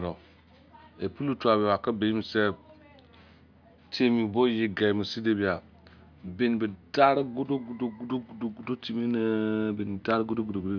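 No technical faults can be heard in the recording; the signal stays continuous and intact throughout.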